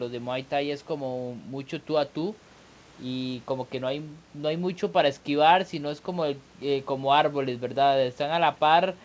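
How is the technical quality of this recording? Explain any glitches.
The technical quality of this speech recording is sound, with no glitches to explain; it carries the band-limited character of a call path, with nothing above about 8 kHz.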